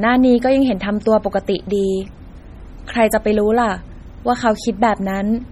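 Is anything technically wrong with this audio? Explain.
Yes. Throughout the speech there is heavy codec damage, likely from MP3 compression at a low bitrate, around 32 kbps. The audio has a watery, swirling texture. Sibilants break into metallic chirps, and consonant onsets sound smeared. This happens because the encoder, starved of bits, discards weak frequency lines, and those lines then appear and vanish from frame to frame. The band still extends to about 20.2 kHz, so the damage is this unstable fine detail rather than lost treble.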